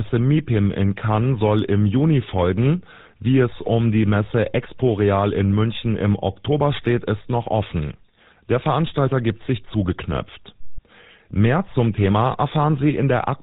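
GSM full-rate codec damage runs through the whole speech clip, from the first second to the last. The coder models the vocal tract as a filter and excites it with a coarse, regularly spaced pulse train, discarding two of every three excitation samples, and nothing above 4 kHz survives. The result is a plainly audible buzzy, gravelly roughness over the voice with a dull, band-limited top end, which fits the original 13 kbps full-rate mobile coder.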